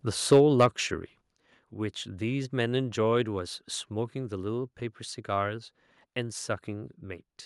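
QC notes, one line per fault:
0.32–0.65 s, microphone overload: the loudest peaks here hit a hard ceiling and their tops are flattened, giving a harsh, crackly edge to the sound. The likely cause is an input level set too high, so the signal tried to exceed the converter's maximum by about 4 dB. Around three percent of the samples in this stretch are clipped.
0.33 s and 1.32 s, microphone volume stepped down: the whole signal, voice and background together, drops abruptly in level, first by about 2 dB right as the distorted peak begins, then by a larger cut of about 5 dB a second later. This is likely the call software reacting to the overload by lowering the device's input gain in discrete jumps, not fading it, so each change lands as a sudden step.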